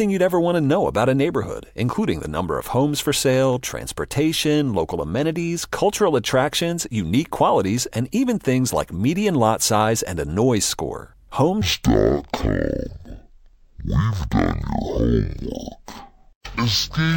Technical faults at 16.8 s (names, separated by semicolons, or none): stereo read as mono